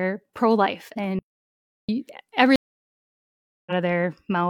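At 1.19 s the speech drops out to dead silence, with no room tone at all, and comes back at 1.89 s. That's an audio dropout to silence, likely a lost input with zeros written through the gap, so about 0.70 s of speech is simply gone. Then at 2.56 s there's a stream reconnect: the audio goes silent for about 1.1 s, and when it resumes at 3.72 s it has jumped ahead by roughly 0.7 s, picking up later in the stream as a fresh decoder starts.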